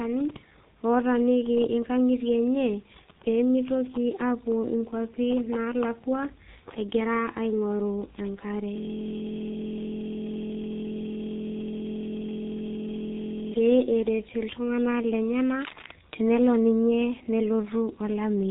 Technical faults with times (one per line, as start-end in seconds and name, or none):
0.00-18.51 G.723.1 codec
15.61-15.91 cable scratch noise